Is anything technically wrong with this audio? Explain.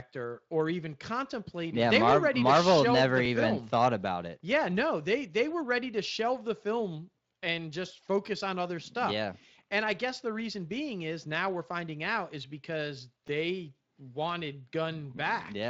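Yes. Overlapping chunks occur at 3.25, 8.27 and 13.28 s, about every 5 s. Each chunk starts 12 ms early, so a fragment replays as a click-stutter, seen as a waveform discontinuity or vertical spectrogram line.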